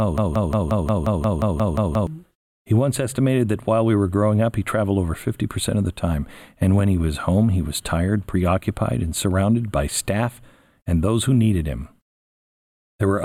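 From the very start until 2.07 s, a broken-record loop is already under way: a fragment of about 177 ms of speech repeats exactly, back to back, around eleven times, giving a rapid stutter of identical fragments. The likely cause is a stalled player, encoder or stream that kept re-sending the last fragment it held. Whatever speech should have played during those two seconds is lost.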